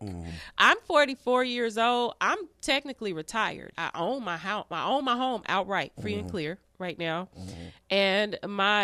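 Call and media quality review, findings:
No faults found in this recording.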